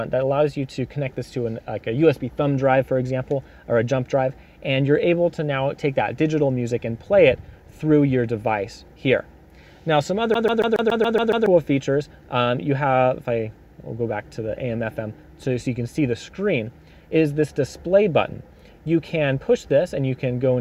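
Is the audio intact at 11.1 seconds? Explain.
No. From 10.34 to 11.46 s the CD is stuck on one turn: a scratch throws the laser back a track, so the same 140 ms snippet plays 8 times, each jump marked by a brief mute. That clipped gap gives the stutter its skipping-disc character.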